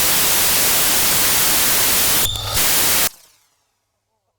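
From the start to 3.07 s the samples are built from the wrong bytes, so low bits dominate and the everyday sound turns into loud hiss.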